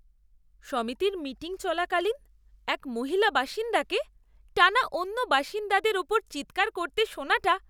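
No technical faults occur at any point in this speech, so there is nothing to describe in time order.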